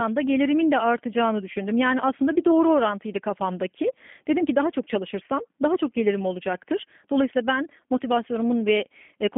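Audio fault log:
Throughout: G.729 codec, plainly audible. The speech is resynthesised from a modelled vocal tract, a pitch predictor and a few pulses per frame, which fits an 8 kbit/s stream and sounds rough and synthetic. Band-limiting runs 200 Hz to 3.4 kHz, with nothing above 3.5 kHz.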